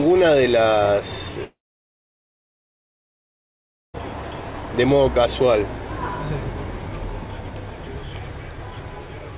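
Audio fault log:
1.44–4.00 s, long network dropout: likely lost packets; the last sound briefly buzzes and fades, then about 2.4 s of silence, resuming without a repeat of what went missing.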